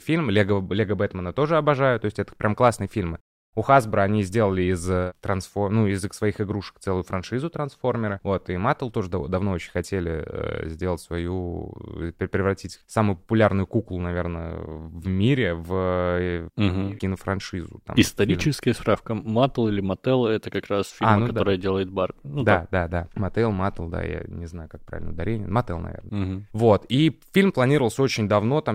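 No technical faults are audible.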